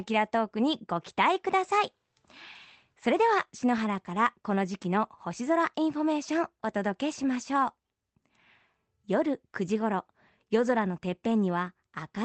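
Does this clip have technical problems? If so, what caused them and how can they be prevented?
No, nothing here needs fixing: the speech has the band-limited character of a WebRTC call path, with content stopping near 8 kHz in a way that fits Opus at a modest bitrate, which is how such a link normally sounds and not a fault to prevent.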